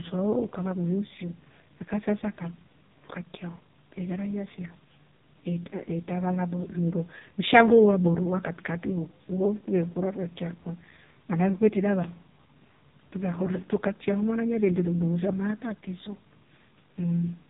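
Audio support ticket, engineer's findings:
AMR narrowband mobile codec, throughout. Speech band-limited, nothing above 3.8 kHz; heavy buzzy, synthetic vocal quality, consistent with AMR-NB's lowest 4.75 kbps mode. Vocal-tract model driven by sparse pulses per 20 ms frame; too few bits for natural timbre.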